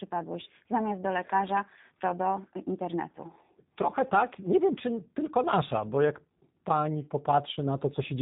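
From start to finish the speech sounds slightly rough and synthetic, with nothing above about 3.8 kHz. That is G.729 codec damage: each 10 ms frame is rebuilt from a vocal tract filter, a pitch predictor and sparse pulses, which fits an 8 kbit/s VoIP link.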